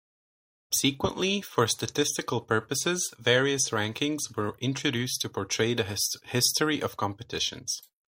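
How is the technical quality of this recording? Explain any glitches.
No glitches or faults are audible.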